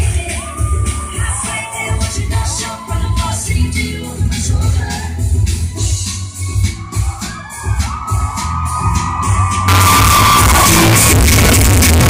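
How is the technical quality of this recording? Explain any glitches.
The recording is clean until 9.68 s, then breaks down badly for the rest of the clip. A float read as integer fault runs from 9.68 s to the end: the audio suddenly turns extremely loud, harsh and almost square-edged, sitting at an almost fixed, high level regardless of the original level. This likely comes from 32-bit float samples being interpreted as 32-bit integers, so each sample's sign and exponent bits dominate its value. Quiet background noise jumps up to match the main sound, though pitch can still be followed.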